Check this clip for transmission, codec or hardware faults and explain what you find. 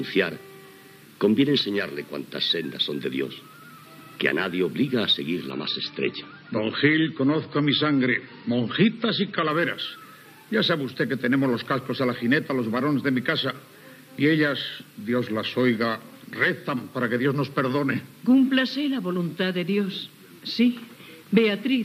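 One fault: an adaptive stream at a lower bitrate from 5.51 to 9.51 s. For these four seconds the player switches to a cheaper encoding, likely because throughput dipped. Treble vanishes above 8.2 kHz and the sound turns swirly, consistent with a drop from about 128 to 24 kbit/s MP3. A spectrogram shows a hard, flat ceiling across the stretch. The waveform has no gap.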